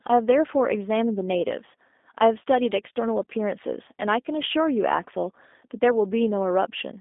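G.729 codec coding runs throughout the speech. Each 10 ms frame is rebuilt from a vocal tract filter, a pitch predictor and a handful of pulses, at a rate that fits 8 kbit/s, so the voice comes out plainly rough and slightly synthetic. The band is squeezed to roughly 250 Hz to 3.6 kHz, and nothing above 3.8 kHz survives, which removes the brightness and crisp consonant detail and leaves a thin, boxy telephone tone.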